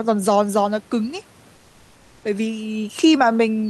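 Comfort noise in place of the background runs from 1.55 to 2.23 s in this speech clip. For about 680 ms the room noise gives way to a steady, featureless hiss about 2 dB quieter, likely from Opus discontinuous transmission pausing during silence and the receiver synthesising noise.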